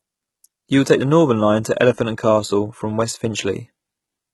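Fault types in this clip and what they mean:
HE-AAC compression: the treble here is rebuilt from lower bands, so s sounds come out gritty and lispy throughout, likely from a very low bitrate around 16 kbps.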